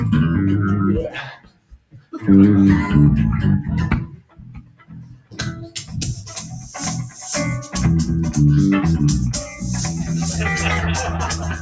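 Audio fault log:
Throughout: noise suppressor applied to music or sounds. The level pumps and thins, with held parts and tails sinking while sharp onsets come through. A speech-oriented suppressor treats steady content as noise, swinging the gain by about 15 dB. The call microphone processing leaves nothing above 8 kHz.
1.35–2.14 s, 4.09–5.95 s, 6.16–6.73 s, 9.46–9.63 s: sound cut by the noise suppressor. Sustained sound dips or its decay is clipped short, by about 16 dB in the first two spans, about 8 dB in the third and about 6 dB in the last. The suppressor misread these stretches as noise, so roughly 0.7 s, 1.5 s, 0.5 s and 0.15 s were pulled down.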